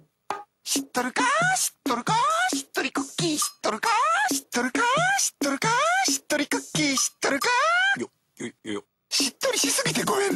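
No dropouts, clicks, distortion or level jumps turn up anywhere in the recording.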